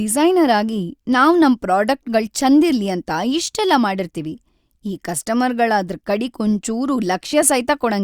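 No technical faults can be heard anywhere in the speech recording.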